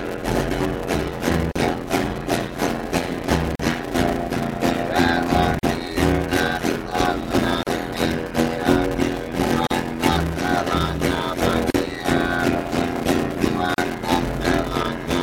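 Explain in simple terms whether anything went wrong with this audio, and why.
Two things went wrong: one runs through the whole clip, and the other keeps coming back about every 2 seconds.

The first is a block size mismatch (padded). One stage hands over chunks of audio that are shorter than the chunks the next stage expects, and the missing part of each chunk is filled with silence. That puts a tiny gap in every chunk. The result is a steady buzz at about 86.1 Hz, which fits a 512-sample block being read each time. The audio also plays at 0.625 times normal speed, but its overall tone colour stays the same.

The second is a gap at a join of encoded pieces. The audio was compressed in separate pieces, roughly every 2 seconds, and the pieces were stuck together without trimming the bit of silence that each compression run adds at its start and end. A short dropout of about 38 to 40 ms opens at 1.52, 3.56, 5.59, 7.63, 9.67, 11.71 and 13.74 s. 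Its edges are blurred. After each dropout the sound continues from where it stopped.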